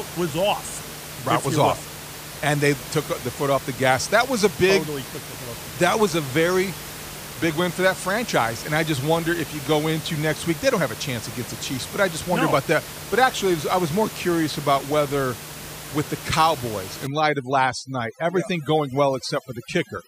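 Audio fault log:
17.07–20.08 s, overdone noise removal: the room noise, about 13 dB below the speech, drops and breaks up into twinkling specks because an over-strong noise reducer pushes bands near its noise estimate far down, along with quiet speech detail.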